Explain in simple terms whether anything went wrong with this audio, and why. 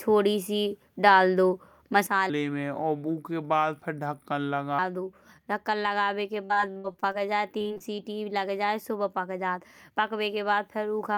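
Three things went wrong, all from about 2.07 s onward.

First, a sudden gain jump: at 2.07 s the level was most likely switched down in one step instead of being faded. From there to the end at 11 s, the speech and the background noise both drop at once to a noticeably quieter level, with no smooth transition, so the change can be heard as an abrupt step.

Second, a section at the wrong speed: from 2.30 s to 4.79 s the audio was probably played against the wrong clock, running at about 0.77 times its proper speed. Because speed and pitch are tied together, the voice there sounds slowed and deeper, roughly four semitones lower, then snaps back to normal pace.

Third, repeated packet loss, which gives a robotic sound, in two bursts: 6.45 s to 7.16 s and 7.58 s to 8.00 s. Small chunks of audio went missing again and again, the longest about 60 ms. Each hole was patched by stretching the sound just before it, so about a third of each stretch is filler, and the speech comes out choppy, with pieces missing.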